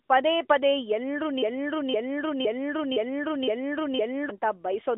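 At 0.06 to 0.10 s and 0.48 to 0.50 s, AMR comfort noise appears. No speech frames arrived, so smooth synthetic noise briefly replaces the narrowband background.

From 1.42 to 4.30 s, a broken-record loop repeats one 0.51 s fragment six times. A stalled stream likely resent it. The intended audio is lost.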